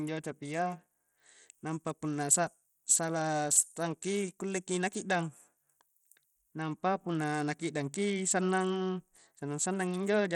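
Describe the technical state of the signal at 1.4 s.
Bluetooth SBC compression, present at 1.4 s and throughout the speech, is the likely cause of the plainly audible grit and flickering treble here. Its coarse sub-band quantisation starves the upper bands of bits, which fits a low bitrate near 80 kbps, and nothing remains above 20.8 kHz.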